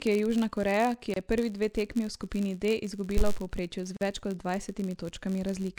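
A speech recording carries a filter restarted on every block throughout: each 512-sample block starts with a small transient, giving an 86.1 Hz buzz, visible as evenly spaced vertical lines on a spectrogram. Two gaps at a join of encoded pieces appear where separately encoded segments were spliced untrimmed. They fall at 1.14 to 1.16 s, lasting 24.5 ms just before "je prvi dve tekmi", and at 3.97 to 4.01 s, lasting 44.3 ms, each showing as a dropout with smeared edges in the waveform. A phantom power thump at 3.17 s, where a supply switched on or off on a live input, shows as a low-frequency swing decaying within about 49 ms.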